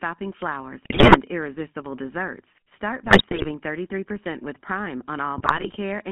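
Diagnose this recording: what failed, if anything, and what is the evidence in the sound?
The codec stage has failed in a lasting way: the whole clip carries GSM full-rate codec damage. The speech is buzzy and gravelly, band-limited to roughly 150 Hz to 3.5 kHz, which fits 13 kbps GSM. The coder models the vocal tract and excites it with regular pulses, keeping only every third excitation sample.

The network link, a weak radio channel, adds GSM bit errors. Squawks, pops and gargling break out at 0.84 to 1.17 s, just before "irresistible desserts", then at 3.04 to 3.50 s and 5.38 to 5.77 s. The bursts point to an error rate of a few percent. Flipped bits corrupt filter, pitch and gain values, bending the spectrum or spiking the level frame by frame.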